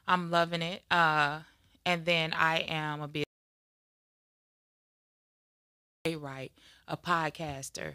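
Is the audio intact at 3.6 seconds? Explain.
No. At 3.6 seconds the clip is inside an audio dropout to silence that runs from 3.24 to 6.05 s, about 2.8 s in total. The input was likely lost, through a disconnection or stray mute, while the recorder kept writing zeros. The sound cuts off abruptly and resumes just as suddenly, with no room tone in between. The waveform shows a flat line, and the spectrogram shows a solid black band across all frequencies.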